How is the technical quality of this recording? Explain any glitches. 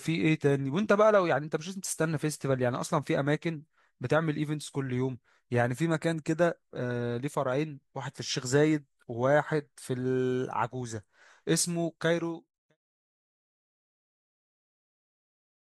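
No glitches can be heard anywhere in this speech recording.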